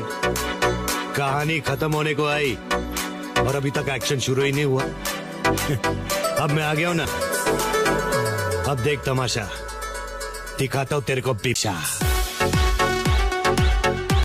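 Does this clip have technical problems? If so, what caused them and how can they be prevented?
Yes. Two very brief faults at 7.04 s and 11.54 s are damaged data in a compressed stream. At each point part of the encoded data was corrupted, so the decoder misread those frames, lost sync and had to find the next valid frame header. Checksummed transfer, with damaged frames retransmitted or concealed, prevents it.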